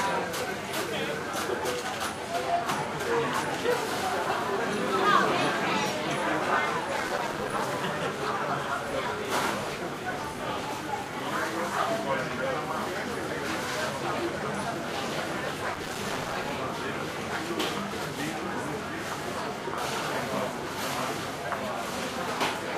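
Twice, from 6.97 to 7.62 s and from 15.74 to 16.50 s, the processor falls behind and misses dozens of short buffer deadlines again and again, pointing to buffers of about 3 ms. Each miss drops in a brief silent gap with hard edges, producing a burst of processor overload crackle.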